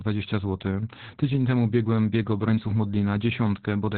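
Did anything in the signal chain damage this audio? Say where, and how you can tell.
Yes, at the codec stage. This is Opus voice compression, and the damage runs through the whole speech clip. Nothing is present above about 4.4 kHz, so the speech sounds muffled and telephone-like. That points to Opus in its SILK mode, squeezed to narrowband, which fits a bitrate near 8 kbps. The linear-prediction coder models the voice, but at that rate the excitation is coded coarsely. That leaves a heavy hoarse, slightly robotic texture on every syllable.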